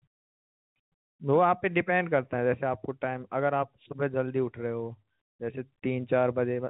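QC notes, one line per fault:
No faults heard anywhere in this speech recording.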